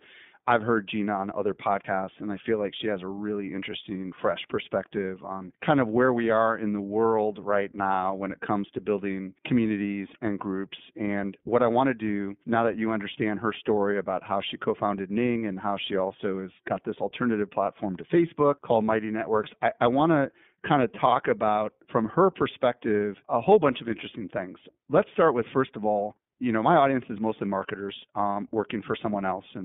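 From start to end, iLBC codec coding limits the speech to 150 Hz to 3.5 kHz and adds a plainly rough, synthetic grain that renews every 20 ms. Plain band-limiting would not add that grain.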